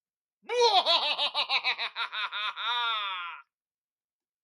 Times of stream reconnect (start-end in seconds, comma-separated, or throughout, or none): none